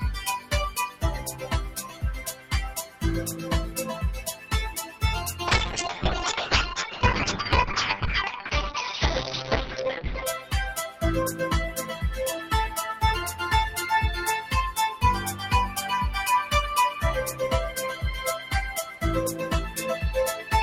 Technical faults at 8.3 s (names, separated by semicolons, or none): noise suppressor applied to music or sounds; call bitrate drop